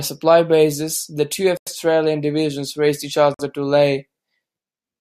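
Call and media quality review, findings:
Dropout to dead silence, 1.57–1.67 s (about 94 ms), after "supply bases the two", resuming at "divisions raced each". Likely Bluetooth stall: radio interference delayed packets, headset buffer ran empty, playback paused until retransmissions arrived.

Second gap, 3.34–3.39 s (about 49 ms), shortly after "divisions raced each". Same cut-and-resume symptom, likely same Bluetooth stall mechanism: starved receive buffer waiting on resent packets.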